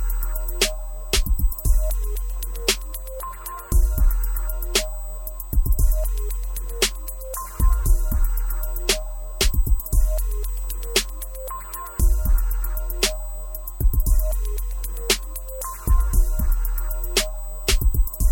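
A recording of sounds carries a USB whine from start to finish: a steady, fixed-pitch tone at 8 kHz, strongest at its harmonic of 16 kHz, sitting roughly 20 dB below the sound. The bus draws current in 125-microsecond microframes, and that repeating load leaks in through power or ground. Mains hum would sit at 50 or 60 Hz and its harmonics, and a switching-supply whistle would rarely land exactly on 8 and 16 kHz, so this pitch points to the USB microframe rate.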